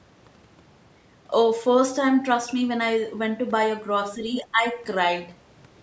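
An echo canceller likely mistook overlapping talk for echo and clamped down, so from 4.42 to 4.76 s the speech is suppressed in double talk, dropping roughly 15 dB.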